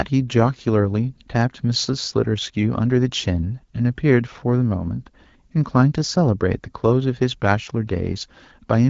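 Nothing goes wrong anywhere in this bit of speech, which comes through as ordinary HD Voice audio carried by the AMR wideband codec at 12.65 kbit/s.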